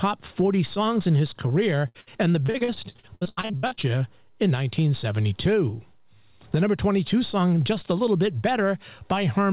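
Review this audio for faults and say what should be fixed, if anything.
Repeated packet loss (robotic sound) runs from 1.88 to 3.85 s in this speech. Gaps up to 80 ms are patched by extending the previous sound, and roughly 40% of that span is filled this way, so it turns choppy with pieces missing. The narrowband call path has nothing above 4 kHz. To prevent this, stabilise the network link or enlarge the jitter buffer.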